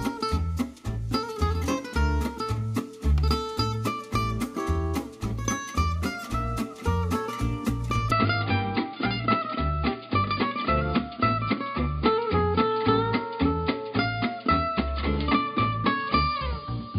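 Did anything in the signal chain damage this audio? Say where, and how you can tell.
Yes. From 8.11 s, with no gap, the sound dulls, cut off above 4.9 kHz, over a faint new hiss. The spectrogram shows a flat ceiling. Likely cause: the input switched to a poorer device.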